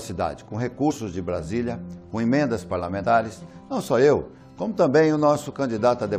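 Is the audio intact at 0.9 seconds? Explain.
No, at 0.89 to 0.91 s a couple of compressed frames are skipped: the decoder never plays them, so the sound jumps ahead by about 50 ms, which fits a frame length near 23 ms. Because neighbouring frames overlap, you hear a brief smeared blip rather than a sharp click.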